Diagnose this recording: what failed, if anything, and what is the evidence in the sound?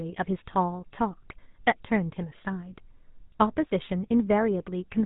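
GSM full-rate codec damage runs throughout this speech, with a buzzy, gravelly roughness and nothing above 3.8 kHz. The pulse-driven vocal-tract coding fits 13 kbps GSM.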